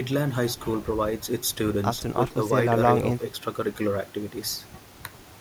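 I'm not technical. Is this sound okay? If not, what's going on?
Yes, this recording is okay, and there's nothing wrong to point to. The speech comes through steadily, with no dropouts, clicks or sudden changes anywhere in it.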